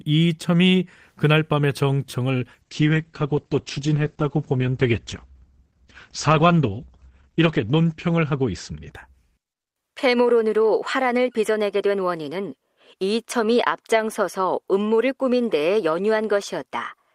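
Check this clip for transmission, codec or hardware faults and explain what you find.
One fault is present: a call bitrate drop from 2.63 to 9.77 s. The speech turns rough and muffled, losing everything above 8 kHz, worst for about 5.1 s. The encoder was given far fewer bits, which fits a fall from roughly 32 to 10 kbps, so Opus coded coarsely and trimmed the top band.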